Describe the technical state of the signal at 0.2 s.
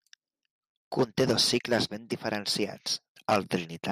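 At 0.2 s the speech signal is intact, with no audible fault at that moment.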